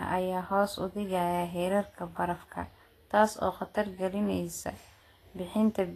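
Vorbis compression, likely the cause, runs throughout the speech: nothing is present above 14.1 kHz, and the remaining treble is grainy and hissy, its fine detail coarsely quantised into noise, with roughened tones and softened attacks. This fits a low bitrate near 33 kbps.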